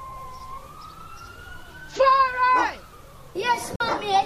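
At 3.76 s the sound cuts out and stays silent until 3.81 s. About 44 ms of audio is missing. When it returns, it does not pick up where it stopped. It jumps ahead, as if it had kept playing through the gap. This is likely a Bluetooth dropout. Packets did not reach the headphones in time and were discarded, so the output fell silent. The length of the hole fits roughly three lost packets.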